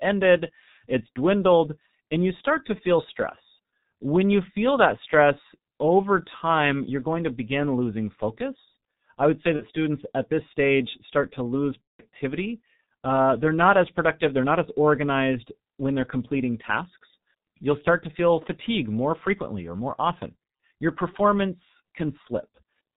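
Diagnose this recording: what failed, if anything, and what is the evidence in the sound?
The codec stage failed throughout: the speech has been through a G.723.1 codec at heavy damage, and the dull, hoarse quality fits its 6.3 kbit/s mode. On a spectrogram everything above 4 kHz is empty, and the formant bands look smeared and stepped rather than smoothly moving, because the coder's vocal-tract model only updates every 30 ms. Consonant onsets lose their sharp broadband edges in the waveform, so consonants sound blurred.

The network stage adds VoIP packet loss concealed by the speech codec at 9.57–9.65 s and 11.82–12.03 s. The first gap's 30 ms fits a single lost frame, and the second spans 180 ms. In each gap the decoder repeats its last pitch and filter at falling gain, so the spectrogram shows the last sound stretched and fading, muted from the third lost frame in the longer gap, and the waveform shows a decaying envelope. 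The sound stays weak or distorted just after each span as the decoder recovers.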